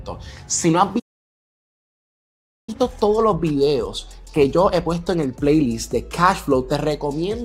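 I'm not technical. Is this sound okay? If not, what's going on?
No. At 0.99 seconds the sound suddenly cuts to silence and stays silent until 2.69 seconds, a gap of about 1.7 seconds. This is a playback stall. The player most likely ran out of audio to play, or got held up by something else on the device, so it had nothing to send out. When it recovers, the sound starts again instead of dropping the missing part.

Right after that, from 2.69 to 5.69 seconds, comes a time-compressed catch-up. The player is behind after the stall, so it plays faster to close the gap. Here it runs at 1.25 times normal speed for three seconds. It does this by snipping out tiny pieces and blending the joins. The pitch stays normal, but the sound feels hurried.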